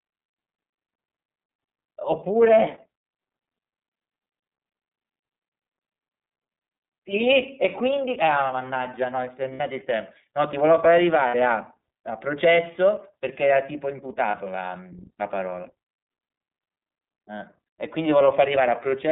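Throughout, the speech sounds slightly rough and synthetic, with nothing above 3.7 kHz or below 150 Hz. This is the iLBC codec: a narrowband VoIP coder that codes each frame's excitation independently, here with plainly audible damage that fits its 13.33 kbps mode with 30 ms frames.

At 9.53 s and 11.28 s, a held, faintly buzzy vowel fills about 60 ms each time, and at 14.30 s a shorter one fills about 30 ms. These are lost iLBC frames, concealed by repeating the last pitch cycle blended with noise. Because each frame stands alone, the speech recovers immediately afterward.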